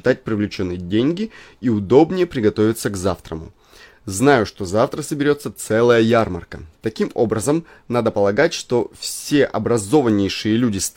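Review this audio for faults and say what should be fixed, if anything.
Nothing here needs fixing; there are no faults to report in this speech recording.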